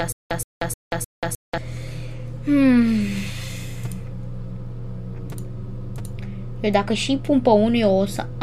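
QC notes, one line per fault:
0.00–1.58 s, stutter with silent gaps: playback likely stalled, replaying its last fragment at each retry and then running empty. A 122 ms burst repeats four times every 307 ms, with 185 ms of digital silence between. It is already under way at the start, and the audio meant for that stretch is lost.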